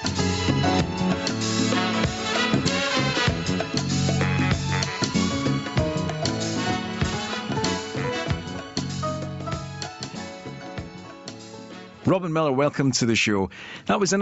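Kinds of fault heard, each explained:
Gain pumping: Input gain set far too high, likely with a fast limiter clamping down on each loud sound, so the level swings by around 20 dB throughout. The sound is left squashed.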